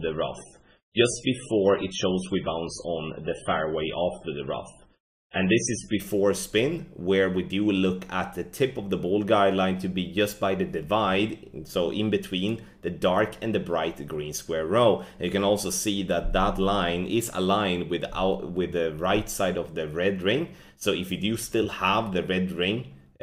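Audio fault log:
0.0–6.0 s, adaptive stream starting at a low bitrate: the opening is dull and smeared, with nothing above 10.5 kHz and strong codec artefacts, which fits a 16 kbit/s MP3 chosen for a quick start. At 6.0 s it jumps, without a gap, to quality fitting 128 kbit/s.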